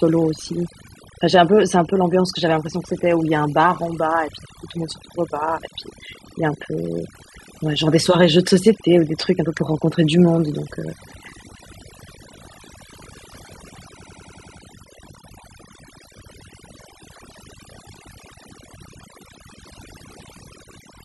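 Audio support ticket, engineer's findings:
Overdone noise removal, whole clip. Background pushed down, breaking up into twinkling specks. Denoiser set too strong, gating bands near its noise estimate.

System hang loop, 14.03 to 14.58 s. A 93 ms slice repeats six times at 10.8 Hz, a machine-gun stutter, fitting a 4096-sample buffer. Computer or driver froze while hardware replayed its ring buffer. Roughly half a second lost.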